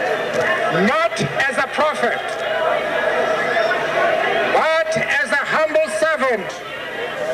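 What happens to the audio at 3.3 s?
Nothing goes wrong at 3.3 s; the audio plays through that moment intact, with no dropout, click or distortion.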